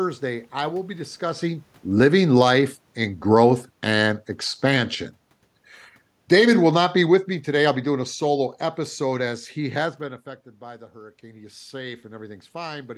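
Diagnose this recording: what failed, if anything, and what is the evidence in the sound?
The automatic gain control in the call processing stage misjudged the speech as too loud and pulled its gain down gradually: about 7 dB from 1.85 to 4.81 s, just after "I will be discussing", and about 6 dB from 6.17 to 9.95 s, ending before "been affected". Voice and room noise sink together, which is automatic gain falling rather than the talker moving.

The same control also pushed its gain up slowly, which is automatic gain rising. It added about 4 dB from 2.48 to 2.86 s, and about 4 dB from 10.59 to 12.93 s after "been affected". That second rise follows an input drop of about 15 dB as the talker moved away around 10 s. Speech and background swell together.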